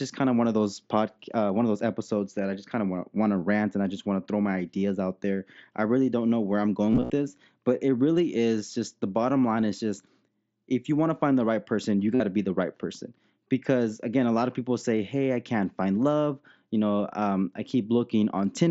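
From 1.50 to 5.22 s, right after "of those pod uh" and up to "there I really don't", the speech turns dull and muffled, as if a blanket were laid over it. This is de-emphasis applied wrongly: a treble-cut filter meant to undo pre-emphasis acted on audio that never had it, tilting the response smoothly downward so that 10 kHz sits about 11 dB below 1 kHz. Within the mSBC headset path's roughly 8 kHz band, the consonants lose their edge.

Just after "don't know where I'm", from 6.91 to 7.10 s, the audio breaks into brief buzzy, tone-like stretches held at full level, with a slight warble as normal sound resumes before "this but it really". This is concealed Bluetooth headset packet loss. Packets between headset and phone went missing, and the receiver filled each gap by repeating the best-matching slice of recent waveform. About 135 ms were lost across this 195 ms window, the longest unbroken run about 52 ms. 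A second, shorter buzz follows at 12.15 to 12.20 s, after "the right person you", covering about 52 ms before "to be the right".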